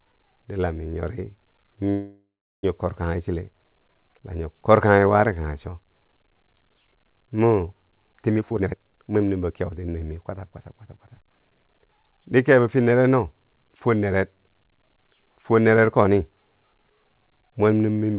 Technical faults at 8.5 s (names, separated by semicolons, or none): jitter buffer speed-up